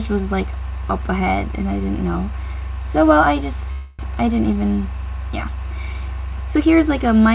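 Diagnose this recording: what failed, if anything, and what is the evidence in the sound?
At the network and jitter buffer stage, a call audio freeze runs from 3.72 to 4.01 s: the last sound is stretched into a fading buzz for about 268 ms, then the audio resumes intact but later. The likely cause is delayed packets draining the buffer, with the audio band-limited to 4 kHz throughout by the call codec.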